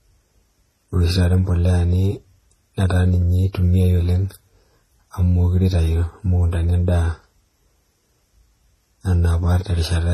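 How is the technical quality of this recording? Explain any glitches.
The technical quality is compromised by layered compression damage across the whole recording. Transcoding between lossy codecs runs throughout: nothing sounds above 12.3 kHz, and smeared, swirly artefacts stack together, likely from a low-rate HE-AAC encode later re-encoded as MP3.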